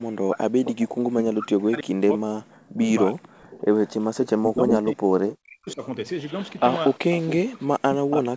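From the start to 0.68 s the speech sinks, falling by as much as roughly 40 dB. This is speech suppressed in double talk, likely an echo canceller that could not tell this talker from loudspeaker echo while both sides spoke, so it turned everything down. From 0.64 to 1.24 s a second copy of the speech trails the original by 334 ms, about 10 dB under it. This is an echo leak, likely from a far-end loudspeaker whose canceller let part of its microphone pickup return down the line.

The speech is pulled down again, by up to about 40 dB, from 1.29 to 3.45 s, for around two seconds in total. The echo returns from 3.51 to 5.74 s, now only about 5 dB below the speech and delayed by 347 ms. It overlaps another suppressed stretch from 4.39 to 5.82 s, where the speech is pulled down for about a second.

A quieter echo, about 15 dB down at a 356 ms lag, runs from 6.45 to 7.34 s. Suppression takes hold once more from 7.36 s to the end, and a brief echo scrap appears at 8.11 to 8.15 s, 360 ms behind.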